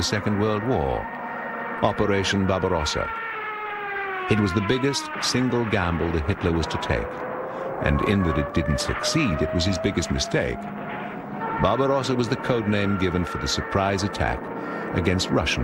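Lost LE Audio frames at 1.77 s and 11.63 s leave brief 10 ms noisy smears, which fits a single frame each. The LC3 decoder patches the gap with recycled spectrum rather than leaving a silent dropout or click. The light lossy compression underneath leaves at most a faint watery texture on noise and attacks.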